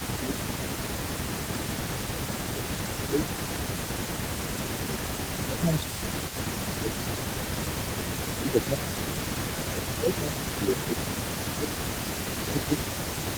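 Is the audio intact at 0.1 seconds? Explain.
No. From 0.0 to 0.54 s the speech is suppressed in double talk. The level dips by around 15 dB. The likely cause is an echo canceller that could not tell this talker from the far end's loudspeaker echo and turned both down.

An echo leak also runs through the whole clip, including this moment. A delayed copy of the speech arrives 374 ms late, about 15 dB below it. The likely cause is a loudspeaker echo the far end's canceller did not fully remove.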